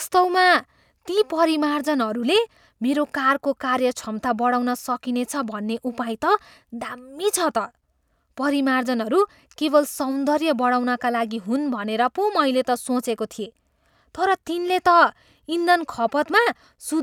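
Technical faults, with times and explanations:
Nothing stood out as a technical fault on listening to this speech.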